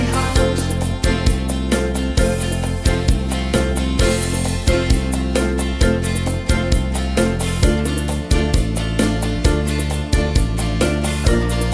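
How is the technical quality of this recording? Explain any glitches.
Listening through the recording, nothing stood out as a technical glitch or disturbance.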